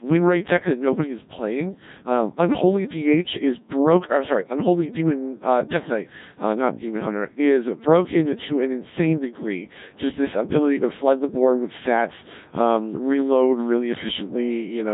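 Throughout the speech, the gain is pulled down by roughly 5 dB under each loud syllable. This is gain pumping, likely from a microphone gain set far too high with a fast limiter clamping it down. Unlike a noise gate, which cuts the background out, this squashes loud and soft parts closer together in level.

The speech itself is heavily mangled by the Codec 2 vocoder for the whole clip: robotic and buzzy, rebuilt from sine waves using only pitch, voicing and a rough spectral envelope, which fits a bitrate around 1.3 kbit/s. Low-bitrate transform codecs leave warbling or smeared highs instead, while here the original waveform is gone entirely.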